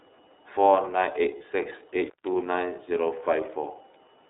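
The whole recording carries the sound of the iLBC codec: speech confined to a narrowband telephone line of about 300 Hz to 3.7 kHz, with nothing above that and little at the very bottom. Each block of the signal is coded independently, and the damage is plainly audible as a rough, slightly synthetic texture on the voice. The block length and character fit iLBC's 30 ms frame mode at 13.33 kbps.

From 1.38 to 1.41 s come lost iLBC frames, a single 30 ms gap. The decoder had no data for that stretch and filled it by repeating the last pitch cycle blended with noise, so the moment comes out as a brief held, faintly buzzy vowel sound rather than silence. Because the next frame decodes on its own, the speech is back to its normal coded quality immediately afterwards.

Between 2.07 and 2.27 s there is an intermittent contact, as if a loose plug or cable briefly lost connection. The signal path stays open for about 142 ms, and during that time the speech drops out, leaving only faint residual hiss. 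The break and the reconnection each produce a crackle at the edges of the dropout, typical of metal contacts scraping apart and back together.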